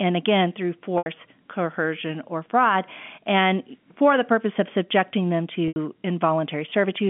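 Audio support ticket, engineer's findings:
Packet loss with pitch repetition, 0.98–1.06 s and 5.68–5.76 s: 80 ms gaps, consistent with four 20 ms packets, bridged by a repeated pitch period. Sound holds buzzily, fades out, then cross-fades back over the 150 Hz–3.4 kHz G.711 line band.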